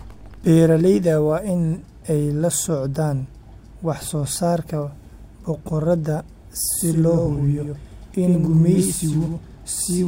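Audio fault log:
6.79 s to end, doubled audio track: from 6.79 s a second full-band copy of the speech sits behind the original by roughly a tenth of a second, about 5 dB quieter, and runs to the end of the clip. It enters abruptly and carries no decay or room colour, so it reads as a distinct slapback rather than reverberation. The likely cause is the signal being captured twice, once through a slower path, with both copies mixed together.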